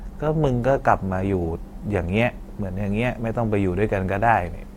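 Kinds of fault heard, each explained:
Adaptive stream starting at a low bitrate: for the first 2.0 s the speech has dull or synthetic treble and heavier codec artefacts, then quality jumps with no gap. The player began on a low-bitrate version, fitting 24 kbit/s Opus, then switched up, fitting 64 kbit/s.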